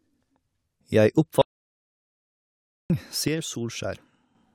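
At 1.42 s the input feed was most likely lost, through a disconnected device, a broken link or an accidental mute, while the recorder kept writing silence. The result is an audio dropout to silence: the speech stops abruptly mid-flow and nothing at all remains, not even room tone, until it resumes at 2.9 s. Roughly 1.5 s of speech is simply missing, and the return is as sudden as the cut.

From 3.28 s to 4.35 s one channel drops out, as one side of the stereo pair stops delivering signal. Once the two channels are summed to mono, the speech common to both falls abruptly by about 6 dB, so the voice sounds noticeably quieter for just over a second. Anything present only in the lost channel vanishes, and the level jumps back up when that channel returns.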